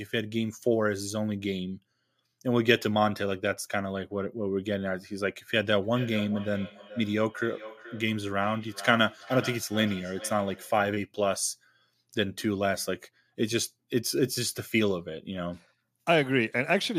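From about 5.83 to 10.86 s there's a feedback echo between two devices: one device plays the other's signal, that mic picks it up again, and neither canceller catches it. The speech returns roughly every 0.4 s, peaking about 14 dB below the direct sound.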